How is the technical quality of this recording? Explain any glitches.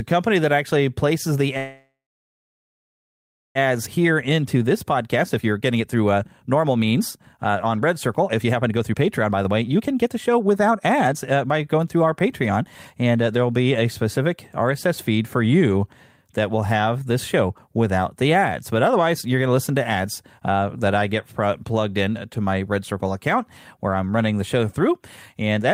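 The recording has two linked timing faults in the speech, both typical of a network call: a dropout followed by a stretch of hurried playback.

Call audio freeze, 1.57 to 3.58 s, right after "that actually places the": the audio stalls for about 2 s. A short buzzy continuation fades into about 1.6 s of silence, most likely because delayed packets starved the jitter buffer. Speech then resumes where it stopped, with nothing lost. On a spectrogram the last spectrum smears, then goes blank, and the waveform collapses flat.

Jitter buffer speed-up, 3.65 to 12.91 s, ending before "and uh there will": the backlog is drained by snipping out pitch-period-sized slices, roughly 2 s in total. The speech runs at 121% speed at normal pitch and sounds rushed. A spectrogram shows unchanged harmonic spacing with compressed syllables and gaps.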